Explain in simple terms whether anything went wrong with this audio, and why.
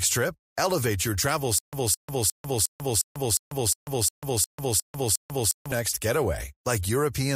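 A stutter with silent gaps runs from 1.58 to 5.72 s. The same short burst of speech, about 213 ms long, repeats 11 times, each followed by 144 ms of dead silence. The playback likely stalled and replayed its last fragment, so the missing speech is lost.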